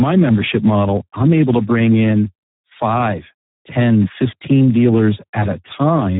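From start to end the speech carries heavy Speex codec damage: a CELP coder starved of bits for its excitation, which fits an 8 kbps setting. Speech comes out hoarse, noisy and edging toward robotic, and nothing survives above 3.8 kHz. Unlike a simple low-pass or telephone filter, which only dulls the sound, here the buzzy, rasping texture within the band itself gives away the low-rate speech coder.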